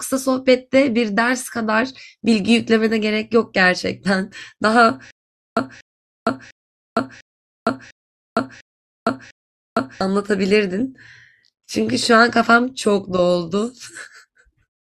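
From 5.11 s to 10.0 s the speech falls into a stutter with silent gaps: a 240 ms fragment replays seven times, each followed by 460 ms of dead silence, a steady 700 ms cycle. Unlike a seamless loop, every repeat ends in digital silence, likely from a stalled stream retrying.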